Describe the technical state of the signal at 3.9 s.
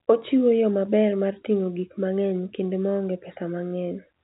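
At 3.9 s the speech is intact, with nothing above about 3.8 kHz because it comes through G.711 telephone coding.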